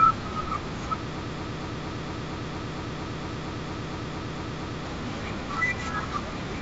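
Speech, carried over G.722 wideband telephone coding with light upper-band hiss, hits a broken-record loop from 1.18 to 4.86 s: a 230 ms fragment repeats 16 times, likely a stalled stream, showing as identical stacked blocks on a waveform.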